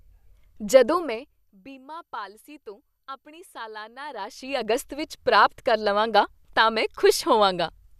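From 4.01 to 4.74 s the speech carries zipper noise. A level change of around 20 dB is applied in unsmoothed 1 dB steps, roughly twenty per second. Each step clicks, so the move is heard as a rapid ticking riding on the sound.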